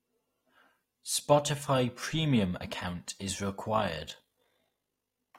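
From 3.74 s, right after "premium account is", the speech takes on overlap-add ripple that lasts to the end of the clip. The audio was split into windowed frames and rebuilt with an overlap whose window gains do not add up to a constant, so the level swings by about 6 dB once per frame, at roughly 50 Hz. This is heard as a rough, buzzy tremolo. On a waveform the envelope shows regular scalloping, and a spectrogram shows vertical banding at that rate.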